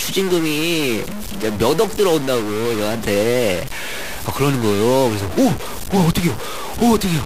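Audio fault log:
Throughout, stuck bit: harsh, buzzy distortion across the speech, with noise filling the pauses, likely from one data bit held fixed, giving errors of about -25 dBFS.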